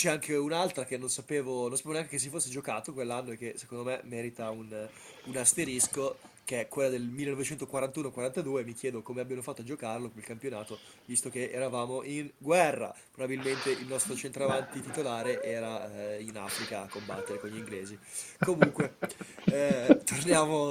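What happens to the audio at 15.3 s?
At 15.3 s the speech is still caught in the echo with no canceller that runs through the whole clip. A far-end loudspeaker feeds the mic, so each phrase returns roughly 0.4 s later as a thinner copy, about 10 dB down.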